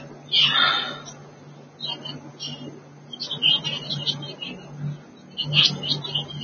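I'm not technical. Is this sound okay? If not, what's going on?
No. The speech was most likely squeezed hard by Vorbis compression, which saves space by throwing detail away. Throughout, everything above 6.5 kHz is gone, so the speech sounds dull and muffled, with a grainy hiss where the crisp upper detail should be.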